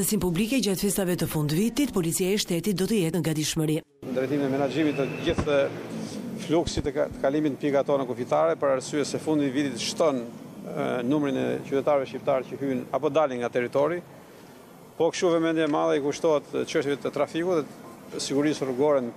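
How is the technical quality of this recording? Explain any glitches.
There's one glitch, a case of repeated frames at 10.70 to 10.75 s. A short chunk of the compressed stream got played twice, so the decoder ran the same 52 ms of audio back to back. That length fits a couple of codec frames being written or sent again. You hear it as a quick stutter, and the clip ends up 52 ms longer than it should be.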